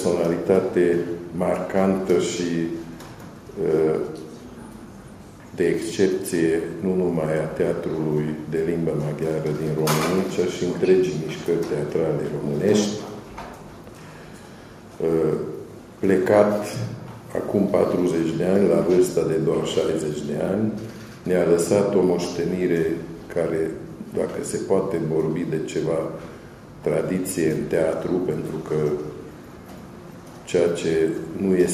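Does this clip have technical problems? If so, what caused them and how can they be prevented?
No, this clip has no technical problems, so there is nothing that needs preventing.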